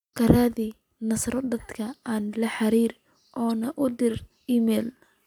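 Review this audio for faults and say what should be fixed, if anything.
Corrupt frame decoded at 3.50 s: a damaged frame was played anyway, giving a brief error near -30 dBFS, seen as a thin vertical spectrogram streak. Checking frame integrity and concealing any frame that fails, rather than decoding it, would prevent this.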